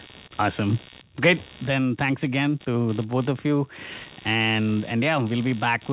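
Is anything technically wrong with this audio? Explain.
Yes, there is computer activity noise throughout the speech. Processor, graphics or mouse load shifts the shared audio ground, adding a buzzy, chirping pulse at roughly 70 Hz, about 25 dB below the speech. Unlike steady mains hum, it flickers with the computer's activity rather than holding a fixed tone. The narrow top end, with nothing above 4 kHz, comes from the call path and points to a narrowband telephone codec.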